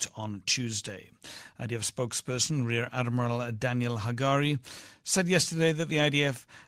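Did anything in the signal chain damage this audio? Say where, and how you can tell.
No, nothing in the signal chain damaged this audio.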